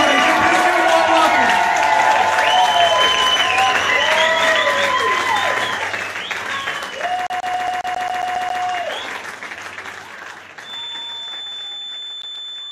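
From 7.27 to 8.63 s the CD is stuck on one turn. The same 0.14 s of sound plays ten times, with a short mute at each jump. A scratch keeps throwing the laser back one track. It sounds like a fast, even stutter.

From 10.59 s to the end, a thin whistle at 3.5 kHz sits about 15 dB below the sound. It holds one pitch. The likely cause is a feedback whistle: the speaker-to-microphone loop is ringing at the edge of feedback without building into a howl.

From 12.22 to 12.49 s, while the whistle continues, the CD sticks on one turn again. The same 0.14 s loop plays twice, with the same brief mutes at each jump back.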